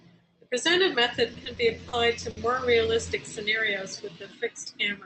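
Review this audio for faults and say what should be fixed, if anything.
From 1.33 to 1.95 s the speech stutters and drags, catching five times. These are repeated stalls (stutter): packets arrived late, the jitter buffer kept running dry, and the receiver filled about 80 ms in total by continuing the last sound, 40 ms at most per gap. A larger or more adaptive jitter buffer would absorb this arrival jitter.

At 2.31 to 2.39 s one sound is held too long, with a slight buzz or dip. This is a short stall from a late packet: the buffer emptied, 60 ms was stretched from the previous sound, and playback resumed where it left off, now 60 ms later. Keeping a little more buffer headroom would cover single late packets.

Between 3.83 and 4.30 s the speech slows to about 87% speed at unchanged pitch, sounding drawn out. This is a jitter buffer slow-down: running low or having just raised its target delay, the receiver repeated pitch periods to add 66 ms of reserve. 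Keeping the buffer near its target delay would avoid this stretching.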